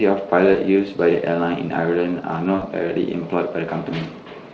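Speech clip with VoIP packet loss concealed by the speech codec, at two points. At 0.53 to 0.59 s about 20 ms of audio is missing. At 2.55 to 2.63 s about 60 ms is missing. In each gap the decoder repeats its last pitch and spectral shape at falling gain, so the sound smears into a buzzy tone or coloured noise that fades. The second gap is longer, and the voice stays weak or distorted for tens of milliseconds just after it. The Speex coding around these gaps adds only light damage.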